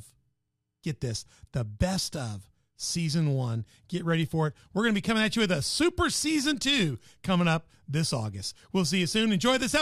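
No technical faults can be heard anywhere in this recording.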